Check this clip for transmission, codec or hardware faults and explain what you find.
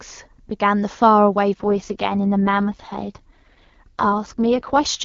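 One transmission fault is present. From 1.54 s to 4.86 s an AMR rate drop forces the wideband coder onto fewer bits, so the speech turns rough, raspy and synthetic, consistent with HD Voice falling from 23.85 kbit/s to 6.6 kbit/s.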